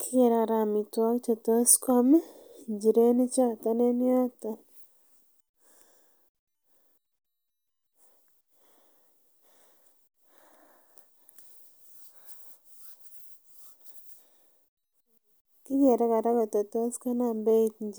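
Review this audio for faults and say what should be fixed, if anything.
Nothing here needs fixing; no faults were found.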